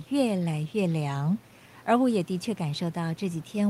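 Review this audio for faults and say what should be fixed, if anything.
No faults found; nothing needs fixing.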